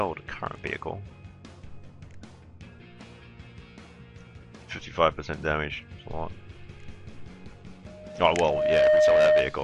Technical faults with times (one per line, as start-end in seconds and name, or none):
7.86-9.59 loudspeaker feedback squeal